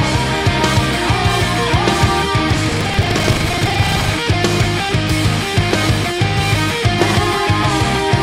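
From 2.65 s to 4.13 s a coarse, robotic rattle rides on the sound, buzzing at about 23.4 Hz and sticking to the signal rather than sitting underneath it. This is buffer tearing: the writing software and the playback hardware have slipped out of step and cross inside every period, so roughly a third of each buffer replays audio from around 150 ms earlier, with hard joins on both sides. The repetition rate fits a 2048-sample buffer.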